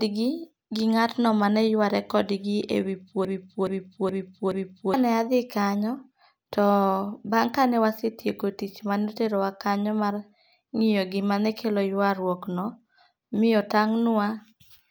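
At 3.25 s, just after "e wi", the speech locks into a broken-record loop: a 0.42 s fragment repeats four times back to back until 4.94 s. The stream likely stalled and replayed its last buffered piece, so the intended audio there is lost.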